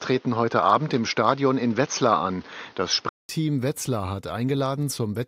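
From 0.00 to 3.29 s the speech sounds dull and boxy, likely an input switched to a poorer device. The spectrogram is empty above 6.6 kHz, and a 200 ms silent gap in the waveform marks the switch.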